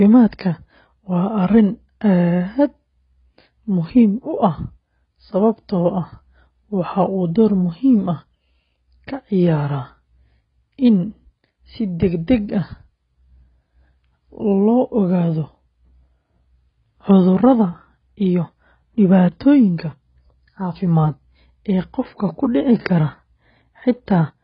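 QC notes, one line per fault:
Throughout, AAC compression: the speech sounds dull and smeared, with nothing above 5.5 kHz and fizzy, warbling sibilants, likely from heavy AAC-LC coding at about 16 kbps. A spectrogram shows a hard ceiling at 5.5 kHz.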